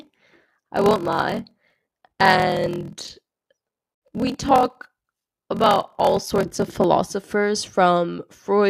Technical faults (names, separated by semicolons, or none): block size mismatch (padded)